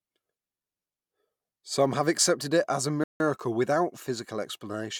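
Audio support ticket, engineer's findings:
Dropout to silence at 3.04–3.20 s, right after "accepted it as a", roughly 0.16 s gap then resumes; likely a Bluetooth stall, headphone buffer running dry while resent packets arrive.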